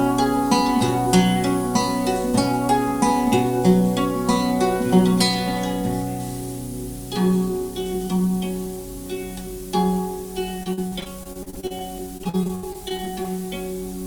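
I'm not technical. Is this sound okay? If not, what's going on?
No. Between 10.63 and 11.82 s, and again from 12.17 to 13.30 s, there is repeated packet loss (robotic sound). Chunks of audio went missing again and again, and each hole was patched by stretching the last sound, so those stretches turn choppy and robotic.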